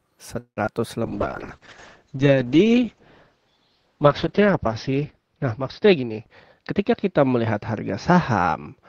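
A speech recording with four kinds of call fault. From 0.39 to 0.73 s there is a call audio freeze, likely caused by packets held up in transit until the jitter buffer ran empty. The receiver stretched the last sound for about 174 ms, then went silent for about 90 ms, before resuming where it stopped, leaving a gap and pushing everything later by about 174 ms. Inside that stretch, at 0.63 to 0.66 s and 0.66 to 0.69 s, come two short concealed packet losses. In each, 20 ms never reached the decoder in time and was patched by extending the preceding audio, heard as a brief smear before the real signal blends back. From 1.04 s to the end, a call bitrate drop takes the encoder from 64 kbps down to 7 kbps, holding the lowest rate for about 3.4 s. The coarser coding makes the speech rough and watery, and the audio bandwidth shrinks from 20 kHz to 6 kHz, muffling it. Finally, the jitter buffer had collected more audio than its target, so two jitter buffer speed-ups trimmed pitch-period slices to cut the delay. 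From 5.95 to 6.17 s the speech runs at 126% speed with about 70 ms removed, and from 6.59 to 7.62 s at 109% with around 100 ms gone. Both passages sound hurried at unchanged pitch.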